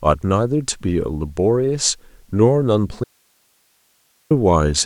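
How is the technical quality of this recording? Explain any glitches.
The recording has one clear glitch. From 3.04 to 4.31 s there is an audio dropout to a faint residue. The speech cuts off abruptly for about 1.27 s, leaving only hiss roughly 45 dB below the signal. The likely cause is a break upstream while the downstream path stayed live.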